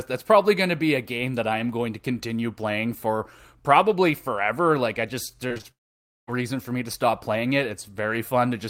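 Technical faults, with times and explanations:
5.47–5.66 s, repeated packet loss (robotic sound): the speech goes choppy here. Four short gaps, the longest about 27 ms, get patched by stretching out the preceding sound, so nearly half of this 0.19 s stretch is filler rather than real audio.
5.71–6.29 s, long network dropout: the last sound smears on briefly and then there's roughly half a second of silence. When the speech comes back, a few milliseconds are simply gone. The likely cause is the stream stopping arriving for that whole stretch.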